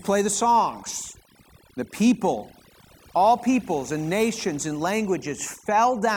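A speech clip, with overdone noise removal from start to finish. The noise reduction was pushed too hard. Frequency bands near the noise estimate get cut almost to nothing, taking quiet parts of the voice too. Pauses fall to near silence with twinkling specks.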